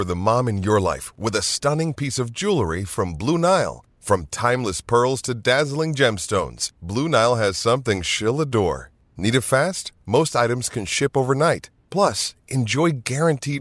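No technical faults can be heard anywhere in the recording.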